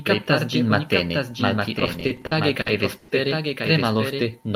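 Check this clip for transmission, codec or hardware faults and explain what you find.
Three faults turn up in this speech.

Doubled audio track: the whole clip has a second, dry copy trailing about a second behind and roughly 5 dB down. It's likely a slower second capture path or a misaligned edit.

Repeated stalls (stutter): from 1.79 to 3.10 s, right after "kaptas ĝin matene malpli", the jitter buffer ran dry ten times. Each wait was filled by stretching the last sound, 270 ms in all with the longest at 100 ms. Nothing is lost, but it drags and stutters.

Jitter buffer slow-down: between 3.97 and 4.49 s the receiver repeated single pitch periods to rebuild its reserve, adding 59 ms. That section plays at 90% speed with unchanged pitch and sounds slightly drawn out.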